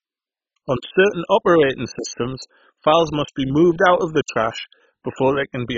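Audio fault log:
Throughout: MP2 compression, likely, given a dull, band-limited speech sound with nothing above 7.5 kHz, heavy gurgling and granular distortion, and upper bands flickering in and out. Starved sub-bands are switched off or coarsely quantised, which fits a very low bitrate around 16 kbps.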